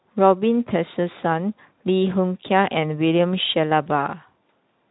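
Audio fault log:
No faults to log for this speech clip.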